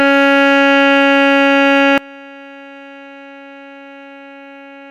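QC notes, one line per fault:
1.98 s to end, sudden gain jump: at 1.98 s the music drops by about 24 dB in a single step, with no ramp, and stays at that lower level to the end. The background noise falls by the same amount at the same instant, so the whole signal was rescaled. The likely cause is a digital gain setting or bit shift applied without smoothing. A fade or compressor would glide instead of stepping.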